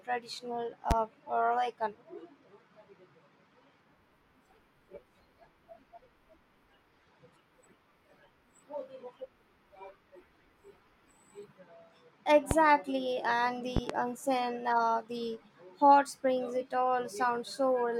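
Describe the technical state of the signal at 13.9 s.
A loud pop sits across 13.77 to 13.93 s: two sharp thumps in quick succession, standing far above the speech level, with the speech carrying on underneath. The likely cause is a sudden voltage step or pulse, such as a plug, switch or static discharge, entering the chain, with the following circuitry rounding it into a thump. Unlike a dropout or digital glitch, nothing is missing from the speech; the pops are added on top.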